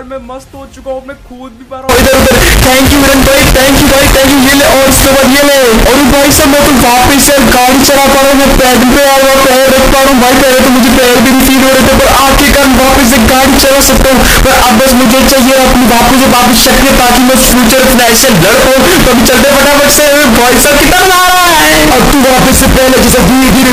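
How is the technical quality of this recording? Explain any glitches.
Poor: from 1.89 s to the end, the float read as integer fault makes the sound extremely loud and harsh, with background noise as loud as the main sound, though pitch remains traceable. It's likely 32-bit float samples read as 32-bit integers, squaring the waveform at a nearly fixed, high level.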